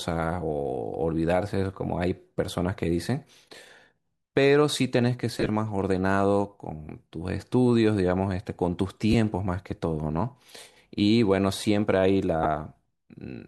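Speech with brief noisy, smeared dropouts at 5.39–5.49 s, 9.13 s and 12.43–12.46 s: lost LE Audio frames, which the LC3 decoder concealed by repeating the last spectrum with randomised signs.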